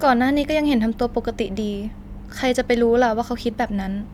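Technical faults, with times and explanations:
No technical faults are audible in this speech.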